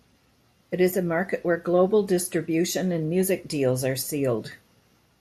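No technical faults can be heard anywhere in the recording. There is nothing in the speech signal that calls for comment.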